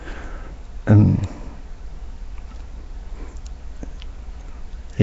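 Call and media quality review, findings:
Rough, hissy halo and smeared, underwater quality on the speech, start to end. Nothing above 7.7 kHz. Likely Nellymoser compression, the old Flash mic codec, which fits around 32 kbps. Fixed two bits a sample in 256-sample blocks; weak bands get zero bits and noise fill, hence the hiss and smear.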